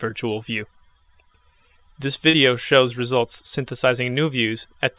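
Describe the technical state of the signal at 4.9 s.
At 4.9 s the signal is intact, with no fault, only the narrowband call-path sound that stops at 4 kHz, which fits a G.711 A-law link at 64 kbps.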